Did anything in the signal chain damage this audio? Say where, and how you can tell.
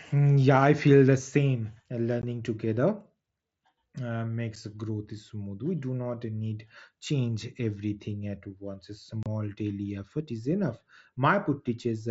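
Yes. Three brief dropouts occur at 2.22 s, at 4.56 s before "growth smooth", and from 9.23 to 9.26 s before "daily effort is enough". This is unconcealed Bluetooth headset packet loss on the wireless link: missing packets became silence or an idle pattern, and the gaps fit one to four 7.5 ms frames.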